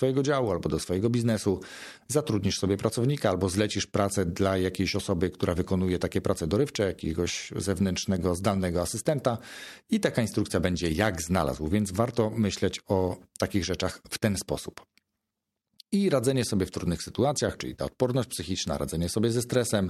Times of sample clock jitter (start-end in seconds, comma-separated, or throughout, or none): none